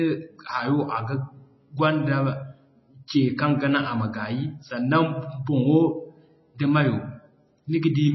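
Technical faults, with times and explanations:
Throughout, MP3 compression: Nothing is heard above 5.8 kHz, so the speech sounds dull. The damage is plainly audible, with a watery, swirling texture. This is likely a starved MP3 encoder, fitting about 24 kbps. It cut the treble and dropped weak detail.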